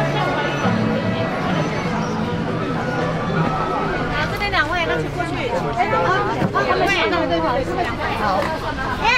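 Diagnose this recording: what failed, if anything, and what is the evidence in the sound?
No fault found in this recording.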